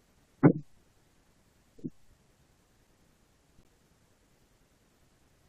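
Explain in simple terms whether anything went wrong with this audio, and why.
Yes, at 3.63 s there is a gap between stream segments: the audio arrives in 2-second pieces, two pieces don't quite line up, and the player fills about 15 ms with hard-edged silence. Unlike a dropout, no speech is lost; everything after simply shifts slightly later.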